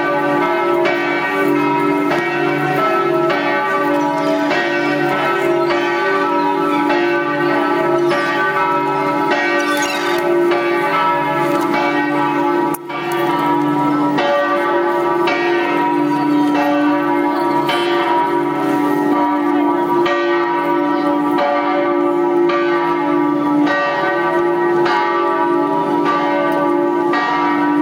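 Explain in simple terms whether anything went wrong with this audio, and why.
Throughout the clip there's gain pumping: loud and soft parts end up much closer in level than they should be. It's likely the input gain was set way too high, with a fast limiter yanking the level down each time, leaving everything squashed.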